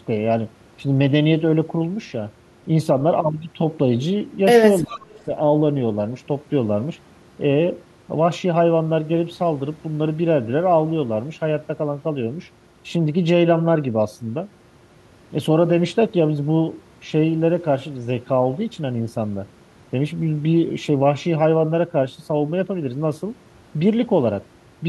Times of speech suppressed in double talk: 4.81-5.17

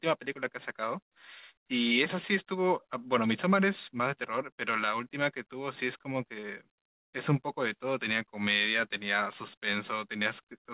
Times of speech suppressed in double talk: none

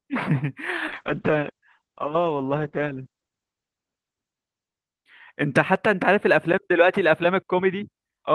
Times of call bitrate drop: 0.89-6.69

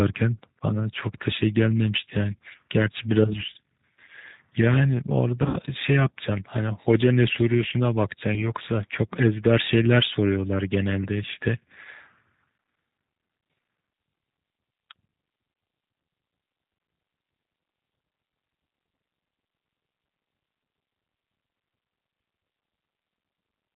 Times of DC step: none

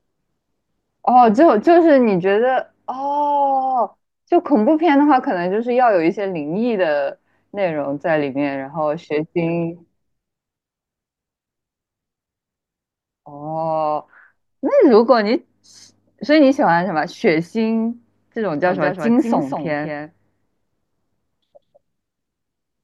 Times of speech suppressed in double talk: none

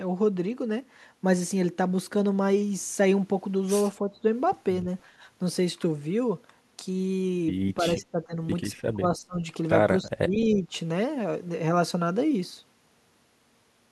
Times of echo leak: 10.55-10.59

